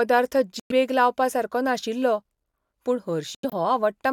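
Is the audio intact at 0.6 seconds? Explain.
No. The speech drops abruptly into dead silence from 0.60 to 0.71 s, just before "लावपा सारको", with timing kept. This is a corrupt frame muted: damaged compressed frames were rejected by the decoder and silenced, and the gap's length fits roughly five frames.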